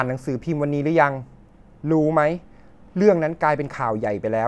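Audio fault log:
Nothing stood out on listening to the speech in this recording.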